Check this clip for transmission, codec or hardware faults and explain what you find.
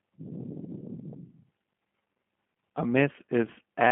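One codec fault is present for the full length: G.729 codec damage. Sparse-pulse rebuilding of each 10 ms frame makes the speech rough and synthetic, which fits 8 kbit/s G.729A. A spectrogram shows a hard ceiling near 3.5 kHz.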